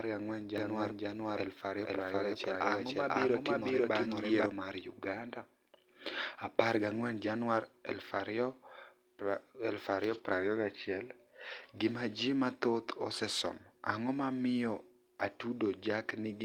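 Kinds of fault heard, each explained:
Doubled audio track: From about 0.58 to 4.46 s the speech runs twice, with a second full-band copy about as loud as the first and roughly half a second behind. It's dry, with no room colour, and cuts in and out abruptly, likely from a second, slower capture path.
Lost packet rebuilt from error correction: At 4.31 s, and again from 10.09 to 10.19 s, there's no dropout, but the sound briefly turns rougher and noisier. A lost 20 ms chunk, then a 60 ms stretch, were rebuilt from low-bitrate backup copies.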